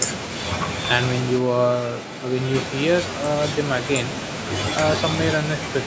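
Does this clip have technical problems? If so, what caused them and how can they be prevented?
Yes: from 1.40 to 2.53 s the speech suddenly goes roomy and hollow, thinner in the bass, a few dB quieter, with more background noise. That's likely a switch to a distant microphone, with the close mic dropping out. To prevent it, check the close mic's connection and battery before recording.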